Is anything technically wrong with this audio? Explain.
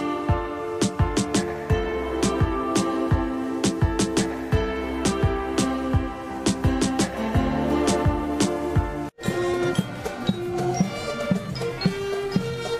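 No, nothing is technically wrong with this audio.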